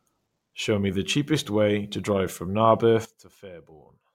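A digital gain setting was likely applied without any ramp at 3.05 s, stepping the level down by about 18 dB between one sample and the next. The result is a sudden gain jump: speech and background noise drop together abruptly and stay quieter to the end.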